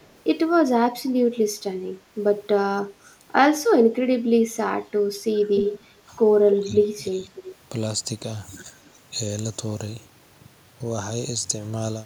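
Echo leak appears first from 0.01 to 0.07 s, a very faint delayed copy. It returns from 5.56 to 5.84 s, much louder at only about 10 dB under the speech. The copy trails by about 0.3 s. The likely cause is a far-end echo canceller letting loudspeaker pickup through.

Speech suppressed in double talk follows. From 6.0 to 6.1 s the speech dips by about 10 dB. From 6.59 to 7.34 s it sinks by up to about 20 dB. An echo canceller likely ducked it while both sides talked.

Echo leak comes back from 7.35 to 7.55 s, about 20 dB down. At 8.85 s it is faint again. Both copies lag by about 0.3 s.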